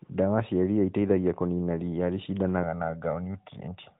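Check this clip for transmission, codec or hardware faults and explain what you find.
One fault stands out. It is heard through a narrowband mobile codec that passes nothing above 4 kHz.

From 2.64 s to the end, right after "ĩteithagia kũnina riia", there is channel delay with comb filtering. One channel lags the other by roughly 1.5 ms. When the two are summed to mono, shared content cancels at evenly spaced frequencies, the first near 300 Hz. The speech turns hollow and phasey.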